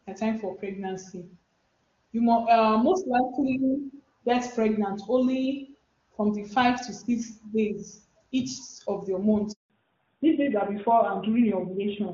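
A network handover interrupts this speech recording at 9.52 s. While the call was passed from one network to another, no speech frames reached the receiver. The result is a handover gap: the voice fades out within a few tens of milliseconds and stays silent for 180 ms, until about 9.70 s, when the new link begins carrying audio. Whatever was said in that interval is simply missing. The call also did not return on HD Voice. From 9.70 s to the end, it fell back to narrowband, which sounds consistent with a switch from AMR-WB at its top rate to AMR-NB at 12.2 kbit/s. The narrowband codec cannot carry anything above 4 kHz, so the sibilance and airy upper detail present in the earlier wideband section are cut away. The last seconds sound duller and rougher than everything before the gap.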